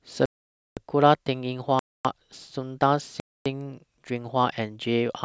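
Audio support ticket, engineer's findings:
Block of digital silence at 0.26–0.77 s (512 ms), 1.79–2.05 s (256 ms), 3.2–3.46 s (256 ms). Hard cut to silence and back. Output buffer probably not filled in time; lengths fit two and one missed 4096-sample buffers.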